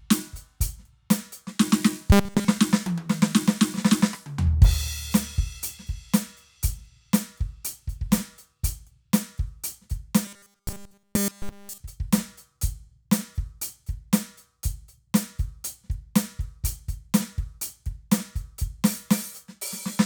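From 2.12 to 2.48 s, and again from 10.25 to 11.80 s, the music turns into robotic sound from repeated short buffers. A rigid metallic buzz at 200 Hz replaces it almost entirely. Likely, new audio arrived too late, so a 5 ms slice kept repeating.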